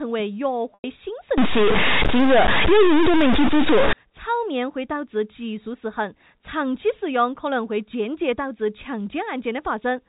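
At 0.74 s, about 100 ms of the speech drops out until 0.84 s. This is packet loss with pitch repetition, a gap that fits roughly five 20 ms packets. The receiver repeats the last pitch period, so the voice briefly holds a buzzy tone, fades, then cross-fades back.

From 1.38 s to 3.93 s, the speech turns distorted. Even the pauses fill with a gritty noise floor. The likely cause is a stuck bit, one data bit frozen at a fixed value. Many samples are then off by that bit's weight, following the waveform's shape.

Both sit on top of G.711 A-law telephone coding at 64 kbps, which caps the band at 4 kHz.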